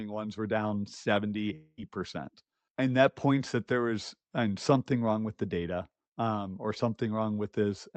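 From 1.55 to 1.80 s, the speech breaks off and a smeared, buzzy continuation of the last sound takes its place. This is most likely a long network dropout. For roughly a fifth of a second no audio reached the receiver. It filled the gap by extending what it last had, and that fill fades without ever reaching silence. When the speech returns, the lost stretch is simply gone. Throughout the clip, the call codec limits the top end to about 8 kHz, which fits Opus at around 32 kbps.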